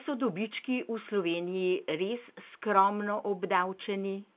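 Nothing is technically wrong with this speech clip; it carries the ordinary 4 kHz band limit of A-law telephone coding and shows no faults.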